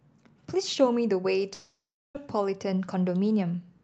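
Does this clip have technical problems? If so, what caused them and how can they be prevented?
Yes. From 1.53 to 2.17 s the speech stretches into a buzzy, fading tail, falls silent for about 360 ms, then resumes with 620 ms of audio missing. This is likely a long network dropout: packets stopped arriving, and the receiver filled the gap before giving up. A steadier connection, forward error correction and a deeper jitter buffer would help prevent it.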